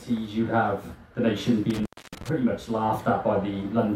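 A loose cable or plug briefly losing connection, an intermittent contact, disrupts the sound between 1.70 and 2.29 s. Within that stretch the signal path opens for about 275 ms, so the audio cuts out with crackle at the edges and only faint hiss remains while the line is open.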